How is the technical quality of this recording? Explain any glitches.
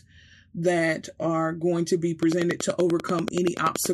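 There's one real problem. From 2.23 s to the end, a regular train of clicks ticks about 10.4 times a second, well above the speech level, likely from interference or a faulty connection.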